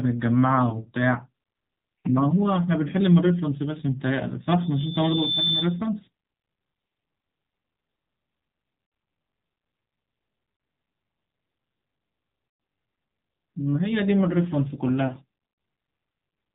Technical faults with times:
0.00-16.54 AMR narrowband mobile codec
0.70-0.76 lost AMR speech frames
4.28-4.34 lost AMR speech frames
8.86-8.92 lost AMR speech frames
10.56-10.60 lost AMR speech frames
12.48-12.60 lost AMR speech frames
15.08-15.12 lost AMR speech frames

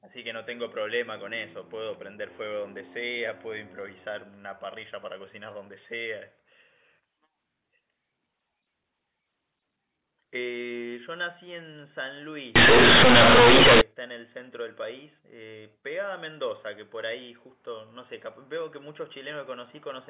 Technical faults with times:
12.56-13.81 companded audio read as linear

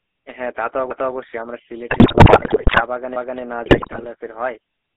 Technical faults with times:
0.00-4.96 GSM full-rate codec
1.90-2.83 GSM bit errors
3.66-4.06 GSM bit errors

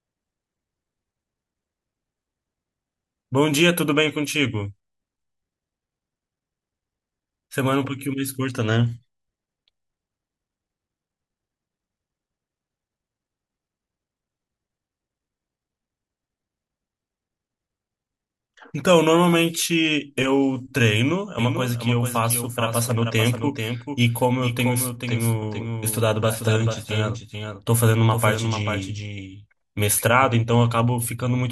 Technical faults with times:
21.39-30.25 doubled audio track

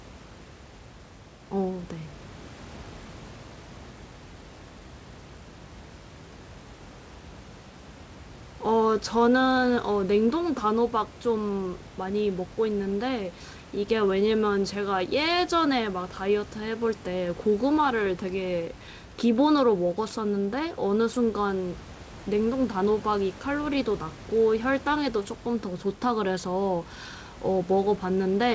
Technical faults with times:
none

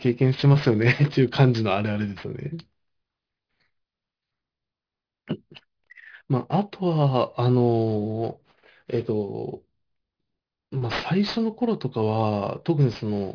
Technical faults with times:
0.00-13.34 aliasing

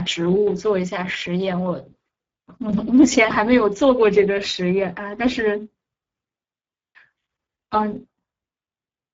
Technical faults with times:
0.00-9.14 Speex codec

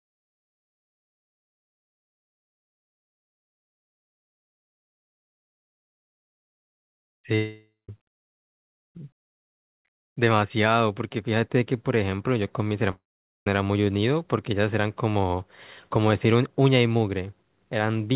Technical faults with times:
7.35-7.89 long network dropout
12.91-13.47 long network dropout

